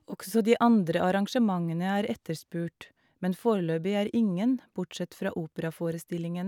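No technical faults are audible anywhere in the recording.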